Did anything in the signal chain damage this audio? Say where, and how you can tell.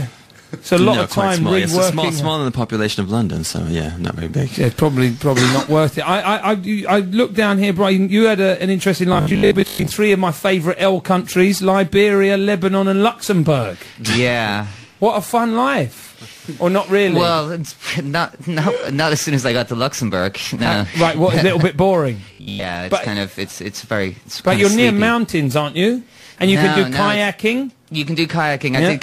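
Yes. Robotic sound from repeated short buffers occurs at 9.13 to 9.87 s and 22.33 to 22.65 s, where most of the audio becomes a rigid, metallic 50 Hz buzz. This is likely a starved driver or buffer stage looping a 20 ms block while real audio is skipped.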